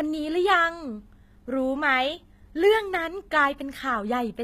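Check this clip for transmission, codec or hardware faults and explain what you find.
One fault runs through the whole speech clip: the treble sounds synthetic rather than recorded. The likely cause is HE-AAC compression at a low bitrate, around 20 kbps. The codec encodes only the lower spectrum and fills the treble by copying lower bands upward under a coarse envelope, so the upper harmonics do not align with those below. The damage is plainly audible, with grainy, metallic s sounds, and nothing is present above 14.9 kHz.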